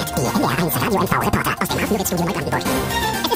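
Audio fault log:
Throughout: audio read two samples at a time (double speed), pairs of samples taken as single frames, so everything plays twice as fast and 12 semitones higher.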